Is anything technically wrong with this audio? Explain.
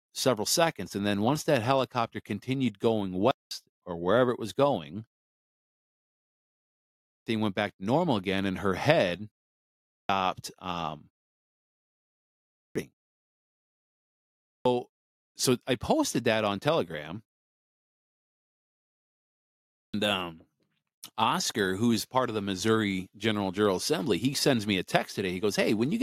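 Yes. There is a clipped start after a pause at 7.03 s (before "went back to normal"), 9.87 s (after "again and her head"), 12.55, 14.44 and 19.72 s. After each silence, the sleeping output device wakes late. Roughly 0.2 s is lost, so the speech starts abruptly.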